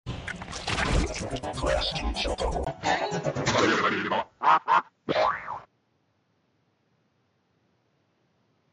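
At 2.65 s the sound abruptly turns duller and boxier and stays that way to the end, which points to the input likely having switched to a poorer device. A 20 ms gap of silence marks the change, followed by a level shift of about 5 dB and a faint new noise floor roughly 45 dB down. On a spectrogram, energy above 7.2 kHz vanishes at that instant, leaving a flat ceiling. The waveform shows a brief dropout and a step in amplitude.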